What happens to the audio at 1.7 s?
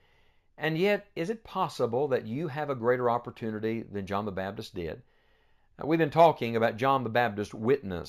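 The sample rate was raised from 16 kHz to 48 kHz by straight-line interpolation, a weak filter, so at 1.7 s, as throughout the speech, imaging from linear upsampling leaves mirror copies around 8 kHz to 16 kHz, roughly 35 dB down, dulling the top and adding a faint metallic shimmer to sibilants.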